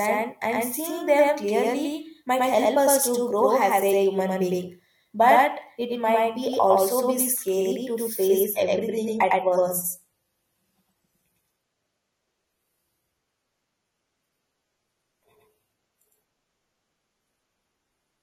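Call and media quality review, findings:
Doubled audio track, whole clip: second full-band copy of the speech about 100 ms behind, roughly as loud, no decay or room colour. Likely a second capture path or an edit holding two copies out of step.

Adaptive stream at a lower bitrate, 8.44 s to end: sudden drop in quality with no gap, treble gone above 14.1 kHz, codec artefacts up. Sounds like the player switched to a lower-bitrate version, roughly 32 kbit/s from 96, when the connection slowed.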